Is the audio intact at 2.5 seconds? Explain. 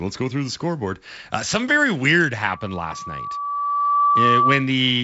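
No. From 2.47 s a steady 1.2 kHz tone swells over about a second and a half into a shrill squeal about 5 dB above the speech, lasting until 4.71 s. This is loudspeaker feedback squeal: the microphone re-captured its own loudspeaker, and at 1.2 kHz the loop gain exceeded one.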